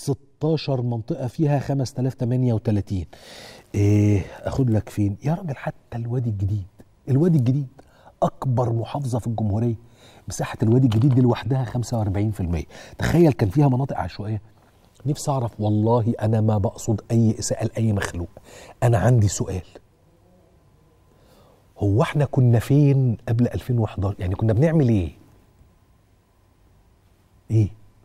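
Nothing stands out here: no dropouts, clicks, glitches or other technical trouble turn up anywhere in this recording.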